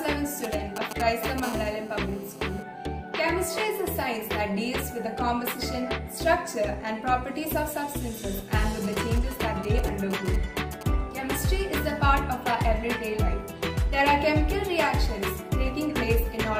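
From 0.44 to 1.4 s there are GSM signalling bursts, loud at roughly 5 dB under the sound: a galloping dit-dit-dit of short 217 Hz buzzes. A nearby 2G phone is exchanging short groups of radio bursts with its network, and the audio circuitry rectifies them into audible pulses. The same pattern returns from 8.84 to 10.83 s, quieter at around 15 dB down.

Right after the first bursts, from 1.43 to 2.63 s, it settles into a steady GSM phone buzz about 17 dB below the sound. That's the hard, raspy 217 Hz tone with lots of harmonics you get once the phone is in a call, transmitting its bursts continuously.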